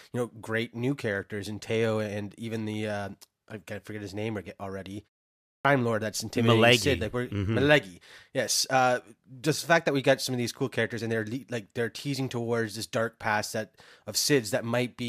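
At 5.37 s, after "forget his name already" and a pause of about 0.37 s, the output device drops into a sleep state and needs time to wake again. This clipped start after a pause swallows roughly 280 ms, until 5.65 s, so "lord that's intimidating" bursts abruptly out of silence without its opening sounds.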